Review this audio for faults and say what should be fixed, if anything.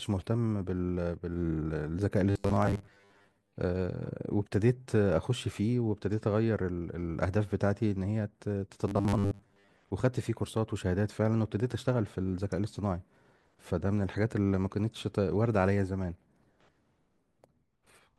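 Robotic sound from repeated short buffers at 2.30 to 3.52 s and 8.88 to 9.70 s: a fixed 100 Hz metallic buzz runs through the speech. This fits a 10 ms block being replayed because new audio likely arrived too late. About half of the first span and most of the second are repeats rather than real audio. Keeping audio delivery ahead of playback, with a larger buffer or higher processing priority, would prevent it.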